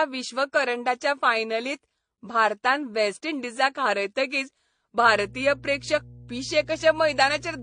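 From the start, the speech carries smeared, swirly high frequencies with a metallic, doubled edge, and nothing above about 9.7 kHz. This points to transcoding between lossy codecs, likely a low-bitrate AAC encode followed by an MP3 encode. On a spectrogram, the top is a flat shelf with blotchy, patchy detail below it.

At 5.06 s, just after "भारतान वेस्ट इंडिजाक हारयतकीच", mains hum enters and continues to the end. It is a steady 60 Hz drone roughly 20 dB below the speech, caused by power-line coupling. A spectrogram shows a constant bright line at 60 Hz, and the waveform gains a regular low ripple.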